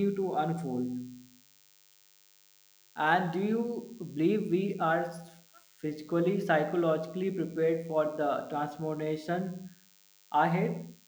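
Speech, with DECT cordless phone buzz running under it from start to finish: a thin, rasping tone at 100 Hz, well below the voice. A nearby handset or base station sends a radio burst every 10 ms, which the audio circuitry rectifies into pulses rich in harmonics. That sharp, buzzy edge and the 100 Hz repetition set it apart from the smoother, rounder 50 or 60 Hz of mains hum.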